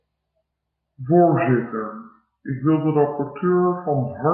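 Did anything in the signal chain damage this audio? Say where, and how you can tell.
Yes. The damage sits at the playback stage, where the speech shows a wrong sample rate from start to finish. Everything runs slow and sounds low, at about 0.73 times normal speed and roughly 5.5 semitones down, with timing and pitch shifted together by the same ratio. That pairing means the samples were clocked out slower than they were captured, with no conversion. The ratio fits 44.1 kHz material played at 32 kHz.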